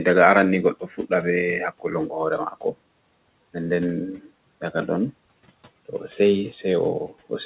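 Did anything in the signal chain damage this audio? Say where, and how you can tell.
Yes. Speech cut by the noise suppressor, at 0.74 to 1.12 s and again at 2.51 to 2.75 s, damaged the audio in the call-processing stage. In each span, roughly a tenth of a second of speech sinks about 14 dB and about 11 dB respectively, so soft consonants and endings sound swallowed. The suppressor misread that low-level speech as the room noise beneath it, about 26 dB down, and attenuated both together. The band stops at 4 kHz, which fits a 64 kbps G.711 A-law call path.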